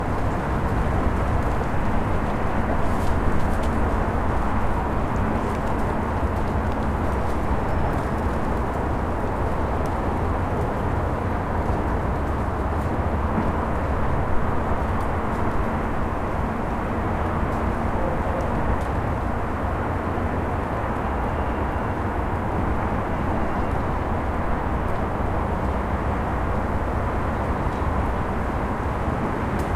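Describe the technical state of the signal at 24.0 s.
At 24.0 s the signal is intact, with no audible dropout, clipping, glitch or other technical fault in the sound at that moment.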